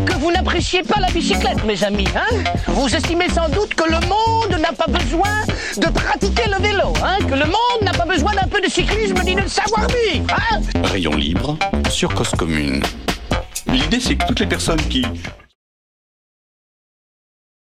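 Nothing stood out on listening, and the level simply eases away in a gentle fade-out that is complete by about 15.56 s.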